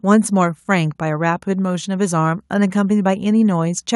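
No technical faults are audible anywhere in the recording.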